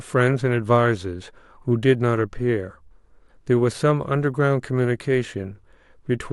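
Through the whole clip, a 100 Hz buzz rides on the speech and vanishes in pauses. This is a resampler restarted on every block. Each 10 ms block was converted alone, likely from 44.1 kHz to 48 kHz, leaving a small error at every edge.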